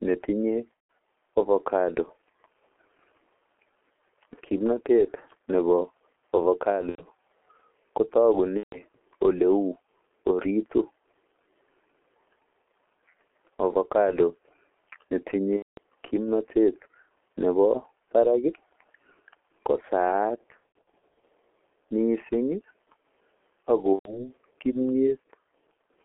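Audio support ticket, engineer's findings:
G.723.1 codec, whole clip: speech muffled and hoarse, consonants smeared, nothing above about 3.4 kHz or below 300 Hz. Narrowband, slow-updating low-rate coder; heavy damage fits the 6.3 kbit/s mode. Spectrogram: hard ceiling near 3.4 kHz, empty band above, fuzzy harmonics, onsets blurred across 30 ms blocks. Waveform: soft transients, envelope changes stepping at frame boundaries.

VoIP packet loss concealed by the speech codec at 0.87–0.89 s, 6.89–7.02 s, 8.57–8.80 s, 15.57–15.78 s, 20.57–21.22 s (scattered, longest gap about 90 ms) and 23.93–24.31 s. Speech stretches into buzzy tone or coloured noise and fades, staying weak or distorted briefly after. Decoder extrapolating last pitch/filter with falling gain; sizes fit 3 to 12 lost 30 ms frames per event. Spectrogram: frozen, smeared harmonics fading. Waveform: repeating periodic cycles, decaying envelope.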